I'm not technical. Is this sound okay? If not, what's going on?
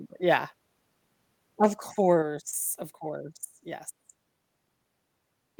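No, it isn't quite right. Around 1.63 to 1.67 seconds the speech gets a brief harsh, crackly edge. That's microphone overload: the mic was likely set too loud, so the loudest moment ran past what it could record and the tops of the sound were chopped flat.

Then at 2.22 seconds everything, speech and background together, suddenly gets a bit quieter in one step. That's the microphone volume stepped down, probably the call software turning the mic down after hearing that distorted peak.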